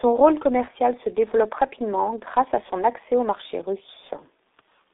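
Speech heard throughout through a G.723.1 codec, and the damage is heavy: the sound is muffled and hoarse, with smeared consonants, because the coder's 30 ms frames and sluggish vocal model can't follow fast changes. The bandwidth fits a telephone line of 300 Hz to 3.7 kHz, and the quality points to a low rate of about 6 kbit/s. A spectrogram would show nothing above 3.7 kHz or below 300 Hz, with blocky, blurred harmonics.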